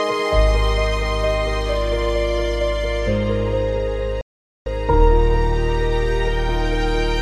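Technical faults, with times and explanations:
4.21 to 4.66 s, playback stall: the sound cuts out abruptly in mid-flow and the output stays silent for about 0.45 s before the audio resumes. There is no fade or decay into the gap, so the source itself has not paused; the silence comes from the playback side. The likely cause is the player running short of buffered data, or its output thread being blocked, so nothing reached the output until it recovered.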